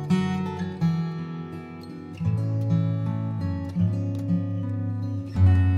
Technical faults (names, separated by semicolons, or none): none